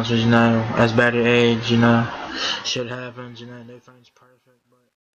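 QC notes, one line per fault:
2.24 to 5.15 s, truncation distortion on the fade: the fade-out, starting around 2 s, turns gritty as the level drops, and is at its worst from 3.68 s on. The undithered stage is rounding to too few steps, which fits roughly 11-bit resolution.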